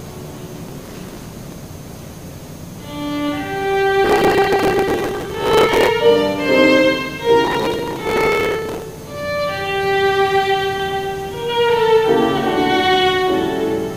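There's a processor overload crackle in three bursts, from 0.64 to 1.58 s, 4.05 to 5.88 s and 7.45 to 8.82 s. The machine couldn't finish its tiny audio buffers in time, so chunks simply got skipped, each leaving a hard-edged jump. The tick spacing fits buffers of roughly a millisecond and a half, with something like a couple of hundred dropped in each of the first two bursts and about 150 in the third, which is why it comes across as gritty tearing that stops once the load eases.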